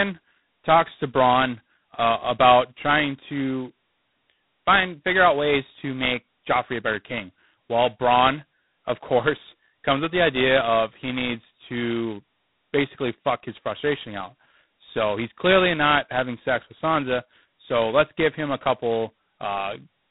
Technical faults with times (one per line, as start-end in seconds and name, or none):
0.00-20.11 G.726 ADPCM